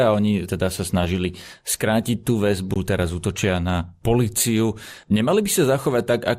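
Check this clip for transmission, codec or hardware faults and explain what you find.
Two faults are audible in this speech: a coarse codec sound across the whole clip and one brief dropout.

MP2 compression runs throughout. The speech sounds dull and carries a gurgling, granular roughness, which fits MPEG Layer II at about 80 kbps. At that rate the encoder cannot fund all 32 of its equal-width sub-bands, so upper bands switch off and back on while the remaining ones are quantised coarsely. This is likely the cause. The band flicker and grit distinguish it from plain low-pass filtering, which dulls the sound steadily without that churning texture.

An underrun with held sample occurs at 2.74 s, between "sa snažili skrátiť tú" and "teraz útočia na policiu". The output buffer ran dry for about 17 ms, and the converter held its last value, so the waveform goes flat. Since roughly 20 ms of live audio was lost meanwhile, playback resumes at a different point in the waveform. 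A zero-fill dropout would instead clack at both edges of the gap.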